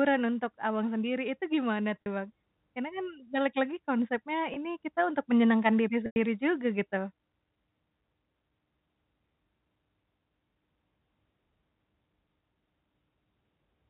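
A speech recording carried over a narrowband telephone line, with two brief stalls where the sound holds on a buzzy, repeated tone, at 2.02–2.06 s and 4.54–4.56 s, and a longer 100 ms dropout at 6.06–6.16 s that fades into silence. These are packet loss with pitch repetition, where the receiver loops the last pitch period to cover missing 20 ms packets.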